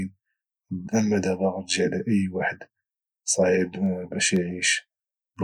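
Periodic USB or driver dropouts after "على اي واحد", 2.86–5.37 s: the bus stalls every 0.5 s, silencing a sliver, heard as regular ticks.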